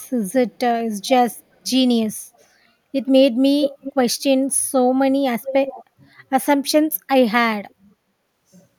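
Speech with an echo leak, a copy of the talker returning about 0.4 s late, heard at 0.00–0.06 s, 1.06–1.10 s, 3.62–3.93 s, 5.43–5.85 s and 7.69–7.74 s. It is strongest at 3.62 s (only about 5 dB under the speech) and at 5.43 s (about 10 dB under), and much weaker elsewhere. The likely cause is a far-end loudspeaker's echo canceller letting some of its microphone pickup through. On a spectrogram, weaker duplicate harmonic patterns trail the speech by 0.4 s.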